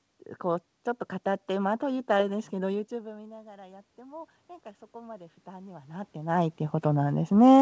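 Automatic gain rising from 2.9 to 4.39 s and again from 4.91 to 6.42 s: after the level at the microphone falls by about 23 dB, the gain control climbs by about 5 dB, then about 4 dB, so voice and room noise swell together over roughly a second and a half.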